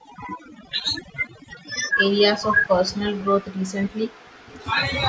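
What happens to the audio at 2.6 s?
The echo canceller likely could not separate the talker from loudspeaker echo while both sides spoke, so from 2.38 to 4.62 s the speech is suppressed in double talk and drops by up to around 40 dB. An overdone noise removal stage, running through the whole clip, also cuts frequency bands it mistakes for noise, leaving twinkling specks in near silence.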